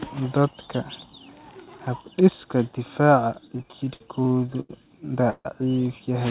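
Speech over a call line, band-limited to nothing above 4 kHz, which fits narrowband G.711 mu-law. From 3.48 to 4.72 s there are repeated stalls (stutter): ten little hangs where the receiver stretched the last sound to cover late packets, about 251 ms in total and the longest 89 ms, so roughly a fifth of that stretch is filler and the speech drags, though nothing is actually lost. Then from 5.30 to 5.48 s the sound holds and fades, with the final 40 ms going silent, and picks up exactly where it stopped. That's a call audio freeze, likely a 148 ms delay spike that drained the jitter buffer before the packets caught up.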